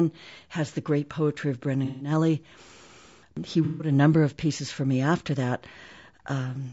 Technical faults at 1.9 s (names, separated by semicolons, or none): low-delay AAC compression; AAC frame loss with concealment